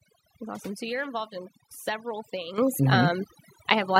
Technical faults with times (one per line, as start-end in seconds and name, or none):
0.00-3.99 overdone noise removal
2.58 microphone volume stepped up
3.96 microphone volume stepped up